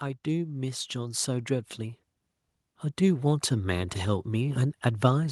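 From 0.24 to 2.07 s, automatic gain rising lifts the level by about 7 dB. Voice and background swell together. A second slow rise runs from 2.64 s to the end.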